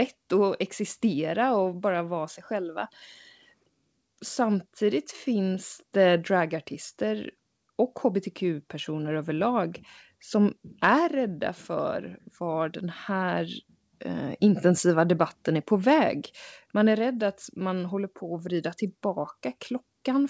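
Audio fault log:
Nothing stood out on listening to this speech, which comes through an ordinary call path with the expected band limit around 8 kHz.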